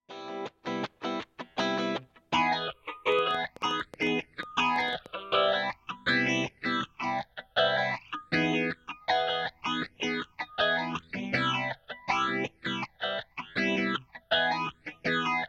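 From 3.12 s to 5.07 s a train of clicks ticks and pops over the sound, around twenty of them at roughly 8.8 per second, arriving at an uneven pace rather than a steady beat. Each has much the same sharp shape, and they peak a few decibels above the surrounding audio and are heard in quieter moments too. The cause is likely electrical interference from nearby equipment or a faulty connection or power supply injecting repeated pulses.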